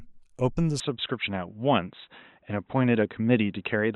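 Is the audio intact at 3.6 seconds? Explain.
No. From 0.8 s to the end the speech sounds dull and boxy, with nothing above 3.9 kHz, likely because the input switched to a poorer device.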